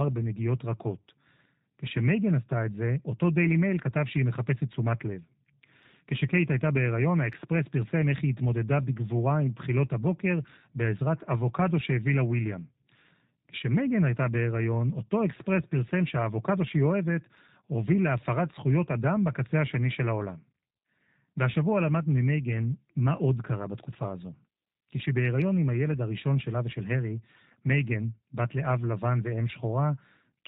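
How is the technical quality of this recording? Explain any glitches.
The technical quality is limited by low-bitrate coding that runs through the whole speech clip, so it's intelligible but clearly processed. What you're hearing is G.729 codec damage, and it's plainly audible from start to finish. The codec doesn't store the waveform; it rebuilds the voice from a vocal tract filter, a pitch predictor and a few pulses per short frame, and the sound fits the codec's 8 kbit/s rate. That gives a slightly rough, synthetic edge, and there's nothing up above 4 kHz, so it sounds dull and phone-like.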